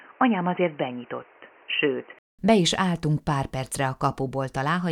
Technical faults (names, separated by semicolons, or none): input switched to a poorer device